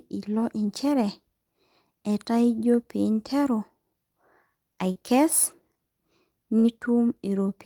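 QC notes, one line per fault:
4.91–4.97 s, short concealed packet loss: about 40 ms of the speech stream reached the decoder too late, so the receiver extended the preceding sound for about 39 ms and blended back into the real audio. This is heard as a brief smear in the speech.
6.59–6.75 s, burst of packet loss: a run of speech data, about 40 ms, was lost or arrived too late to play. The receiver extended the last sound for about 49 ms, turning it down as the gap went on, and cut about 4 ms. The speech then resumes further on after a held, fading continuation.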